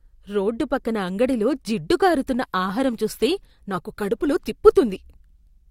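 An adaptive stream at a lower bitrate takes over at 3.06 s and lasts to the end at 5.70 s. The quality steps down abruptly with no gap, and codec artefacts thicken on the speech, which fits a switch from a 64 to a 32 kbit/s Opus version.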